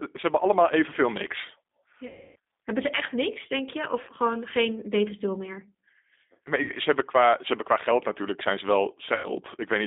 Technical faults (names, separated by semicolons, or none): G.729 codec; VoIP packet loss concealed by the speech codec